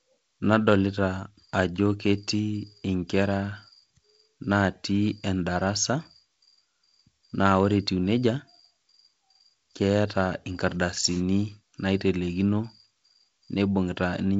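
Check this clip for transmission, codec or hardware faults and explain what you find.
No transmission, codec or hardware faults turn up: the speech travels a normally working G.722 wideband telephone path at 48 kbit/s, with nothing above about 7.8 kHz and only the light band-limited coding texture that this rate leaves behind.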